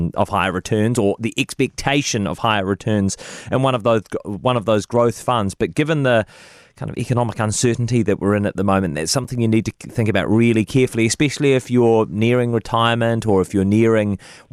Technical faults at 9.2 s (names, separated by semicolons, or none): block of digital silence